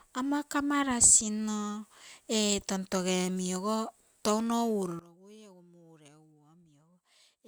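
At 4.99 s, right after "ogo touno", this speech clip drops abruptly by about 20 dB, with speech and background noise falling together and staying low to the end. The fault is a sudden gain jump, likely a digital gain change applied instantly without any ramp.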